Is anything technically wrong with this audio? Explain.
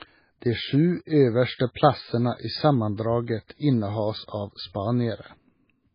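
Yes, two things. Throughout, there's what's likely heavy MP3 compression: nothing above 5 kHz, with watery, swirly speech that points to a very low bitrate. At 1.74 s, just before "plassene i", there's pre-echo, a brief hiss smeared about 15 ms ahead of the attack, as block-wide quantisation noise spills into the quiet beforehand.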